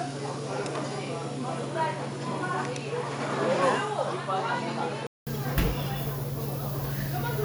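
From the start until 5.27 s, the everyday sound is dull, with nothing above 10.5 kHz and faint new background noise well below the signal. It clears after a 200 ms silence, likely an input switched to a poorer device. The unchanged level, the gap, and the shift in background noise set it apart from a plain filtering fault.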